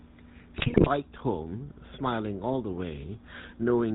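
Throughout, the speech has a buzzy, gravelly roughness with nothing above 4 kHz, the sound of the GSM full-rate codec, which rebuilds the voice from a coarse pulse-driven vocal-tract model. From 0.58 to 0.88 s the voice breaks into squawks, pops and gargling: GSM bit errors corrupting the decoder's filter, pitch and gain values across successive frames.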